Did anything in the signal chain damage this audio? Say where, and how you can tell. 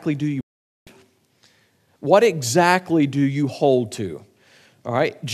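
Yes, a digital broadcast dropout at the reception stage: the speech fades out within about 3 ms at 0.41 s, muting until 0.87 s while the receiver discards failed frames.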